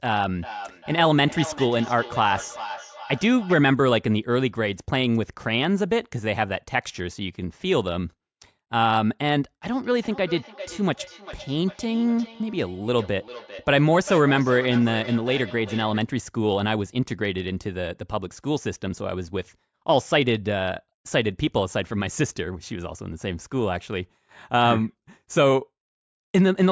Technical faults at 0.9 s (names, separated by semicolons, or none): feedback echo between two devices